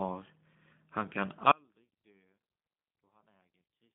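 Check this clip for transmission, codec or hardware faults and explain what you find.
Two faults are present: the speech has passed through a low-rate speech codec for its whole length, and the signal drops out partway through and never returns.

G.729 codec, throughout: The speech was rebuilt from a vocal tract model, a pitch predictor and a few coded pulses per short frame, as a narrowband VoIP line does, which fits 8 kbit/s G.729A. The result is plainly rough and synthetic, and the band is clipped to roughly 150 Hz to 3.7 kHz, with nothing above 3.8 kHz.

Audio dropout to a faint residue, from 1.52 s to the end: The wanted signal was cut off while the path after the break stayed open, likely a lost connection or stalled stream upstream of a still-running output. The speech stops abruptly at 1.52 s, with no pause or fade, and what remains is only a faint trace about 35 dB below the earlier level, lasting to the end of the clip.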